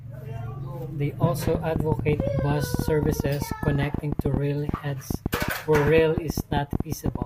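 From 1.47 s to 7.23 s a train of clicks ticks over the speech, around seventy at about 10.6 per second, unevenly spaced and peaking roughly 15 dB above the signal, likely from electrical interference. On a spectrogram they form thin full-height vertical lines; the waveform shows narrow spikes.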